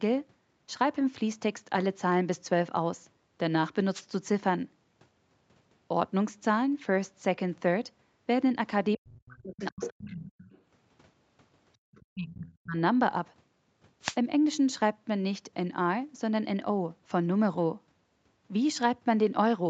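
A wireless microphone noise hit arrives at 3.93 to 4.03 s and again at 14.01 to 14.16 s. Each is a brief swish of static: the analogue FM radio link faded as reflected signals cancelled, letting receiver noise rise over the speech.

Speech suppressed in double talk begins at 8.97 s and lasts until 10.45 s. The speech dips by as much as about 40 dB, likely because the echo canceller, confronted with both sides talking at once, could not separate the talker from loudspeaker echo and attenuated everything. It recurs from 12.15 to 12.77 s with drops of about 30 dB.

The other side's voice leaking through appears at 9.54 to 10.11 s, fairly prominent at around 10 dB below the speech. It returns faintly at 10.46 to 10.61 s and moderately at 11.92 to 12.56 s. Each time, the loudspeaker playback likely reached the microphone and escaped cancellation.

Background gated by the echo canceller is heard at 11.77 to 11.87 s. 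The room sound drops out by about 32 dB for roughly a tenth of a second while the canceller clamps the microphone during loudspeaker playback. It then returns as the canceller releases.

Throughout, the Opus call path leaves nothing above 8 kHz.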